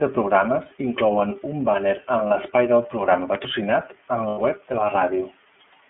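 The whole clip runs through the iLBC codec: the speech is band-limited to roughly 150 Hz to 3.4 kHz and has that slightly rough, synthetic grain, plainly audible throughout. The coding sounds like iLBC's 30 ms frame mode, which would put it at about 13.3 kbps. At 2.28 s there's a short patch of lost iLBC frames, a single 30 ms frame. The decoder papers over it by repeating the last pitch cycle with some noise mixed in, so you get a brief buzzy held vowel before things snap straight back. Between 3.13 and 3.37 s come two loud pops, about 15 dB above the speech, sharp clicks sitting on top while the speech carries on underneath. The likely cause is an electrical step or pulse, such as a plug, switch or static discharge, getting into the chain. Then at 4.28 to 4.39 s there's another run of lost iLBC frames, about 90 ms this time, so the concealed vowel hangs on longer and fades a bit before the speech recovers almost at once.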